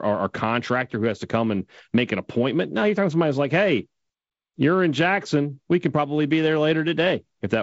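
No faults are present in this speech; its band ends at 7.7 kHz, as G.722 wideband telephone coding shapes it, and the light upper-band hiss and slightly grainier lower band point to the codec running at 48 kbit/s.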